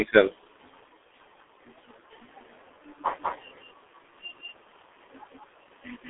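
From the start the speech sounds muffled and hoarse, with smeared consonants and nothing above 3.8 kHz. That is the G.723.1 codec. Its long 30 ms frames and coarse, slowly updated voice model do heavy damage, at a rate that points to roughly 6.3 kbit/s.

At 3.04 s a second, equally loud full-band copy of the speech cuts in about a fifth of a second behind, with no decay or room colour, and runs to the end. This doubled audio track is likely a second, slower capture path mixed in.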